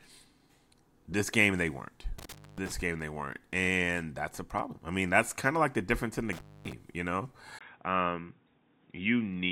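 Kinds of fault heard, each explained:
Intermittent contact: A loose cable or plug briefly loses its connection. The speech drops out twice, from 2.19 to 2.72 s and from 6.33 to 6.73 s. Each time the line stays open for about 250 ms. Crackle marks the moments the contact breaks and returns. Faint hiss remains while the line is open.
Input switched to a poorer device: At 7.59 s the speech suddenly turns dull and boxy and stays that way to the end. This was likely a change of input to a narrower-band microphone or headset. Nothing is heard above 3.8 kHz after the switch. A short gap of 20 ms marks the change. Loudness stays about the same. The new device adds a faint background noise, far below the speech.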